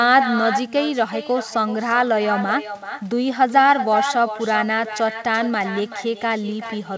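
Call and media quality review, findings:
Echo with no canceller, throughout the clip. Every phrase is followed by a quieter, thinner copy about 8 dB below the direct speech, trailing by roughly 0.4 s. Probable component: far-end echo cancellation missing or disabled. The far end plays the call on a loudspeaker, its microphone picks it up, and it returns after the network round trip. The band limit at 8 kHz on both copies fits a wideband call codec such as G.722.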